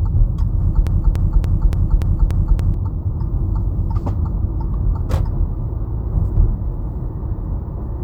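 From 0.87 s to 2.74 s, a fragment about 0.29 s long repeats exactly, back to back, seven times, and whatever sound belonged there is lost. This broken-record loop likely comes from a stalled player, encoder or stream resending the last fragment it held.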